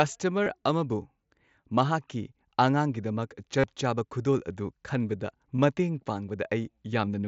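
A speech clip carried over a wideband mSBC headset link has two bursts of concealed Bluetooth headset packet loss, at 0.44 to 0.46 s and 3.59 to 3.64 s. The receiver filled each 22.5 and 45 ms gap by repeating recent waveform, leaving a brief buzzy hold and slight warble on resumption.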